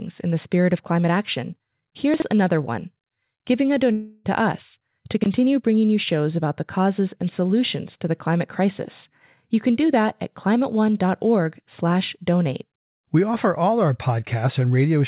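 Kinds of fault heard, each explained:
Chunks out of order: 20 ms blocks replayed in the wrong sequence, heard as a jumbled moment after "spirit of climate action" and after "us to".
Long network dropout: likely a network gap, with about 0.32 s after "another one giving a" filled by a fading buzz before audio resumes at "us to".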